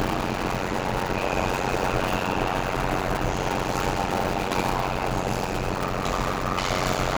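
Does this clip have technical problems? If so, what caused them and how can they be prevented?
Yes. Throughout the sound there is a block size mismatch (padded). Short written blocks, consistent with 256 samples, are zero-padded to a longer read size, producing a 91.9 Hz buzz and 0.533× speed at normal pitch. The waveform shows regular flat gaps, and the spectrogram shows evenly spaced vertical stripes. Prevent it by matching block sizes between stages or by buffering up to the reader's block size.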